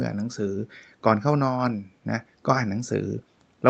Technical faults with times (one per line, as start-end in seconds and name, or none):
none